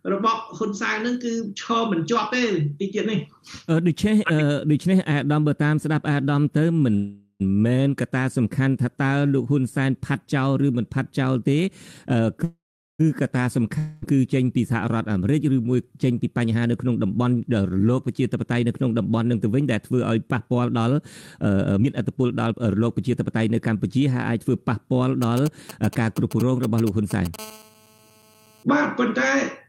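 At 6.95 to 7.42 s and 12.44 to 13.01 s there is a call audio freeze. The sound stalls into a fading fill, with brief silence the first time and about 0.41 s the second, then resumes where it stopped, likely because delayed packets drained the jitter buffer. Nothing is lost, unlike the next fault.

From 13.78 to 14.04 s a long network dropout fills the gap with decaying sound. When audio returns, about 0.24 s is missing, likely from packets that never arrived.

Jitter buffer speed-up runs from 16.14 to 20.92 s at 109% and from 21.46 to 23.85 s at 123%. Each trims roughly half a second in small pitch-period cuts, so the sound hurries while its pitch stays unchanged.

From 25.22 to 27.36 s come GSM signalling bursts. A galloping dit-dit pattern of short 217 Hz buzzes sits about 15 dB below the signal, grouped rather than continuous, from a nearby 2G phone exchanging signalling.

From 27.39 to 28.63 s there is a GSM phone buzz: a steady, raspy 217 Hz tone rich in harmonics, about 24 dB down. 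It is continuous, as during a call, rather than broken into bursts.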